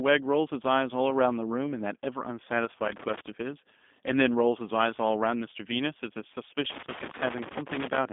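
A speech clip that's been through a G.729 codec the whole way: it's band-limited to roughly 200 Hz to 3.6 kHz with nothing above 3.8 kHz, and it has that rough, synthetic edge of a pulse-excited model, which fits an 8 kbit/s VoIP link. Then from 6.70 to 7.98 s there's loose connector crackle, an irregular burst of crackle and scratching from a worn contact making and breaking.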